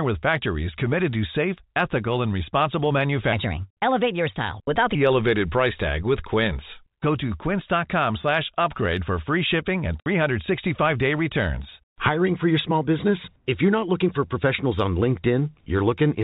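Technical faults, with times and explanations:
3.33 to 4.95 s: section at the wrong speed. This stretch of speech runs 1.24 times too fast, so it sounds hurried and about four semitones higher, with pitch and tempo shifting together. The likely cause is playback or editing against the wrong clock for that segment.
10.00 to 10.06 s: packet loss filled with silence. A 60 ms hole of dead silence cuts the speech, with abrupt edges. Its length fits six lost 10 ms packets replaced by silence, against the narrow telephone-band G.711 background.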